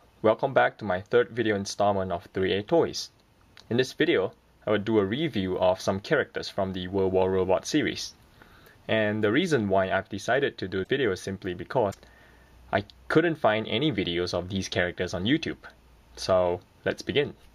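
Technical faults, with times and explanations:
10.83–10.87 s and 11.90–11.95 s, broken MP3 bit reservoir: at each time the sound jumps forward and a brief glitch, roughly 45 ms long, replaces the audio. The likely cause is missing MP3 frames. The frame after each gap still reaches back for data it stored in earlier frames, but those bytes now belong to a different frame, so it decodes wrongly. Each glitch lasts under two frames, which fits frames of about 26 ms.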